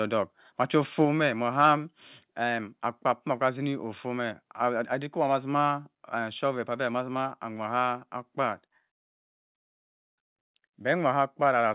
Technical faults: microphone overload; microphone volume stepped down

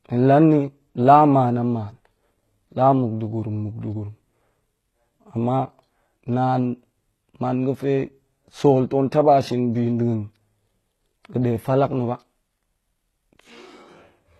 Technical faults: HE-AAC compression

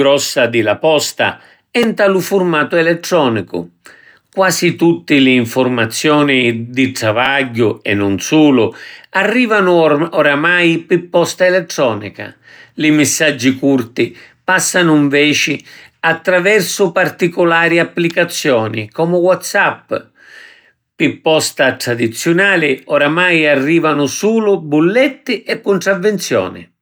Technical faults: repeated buffer

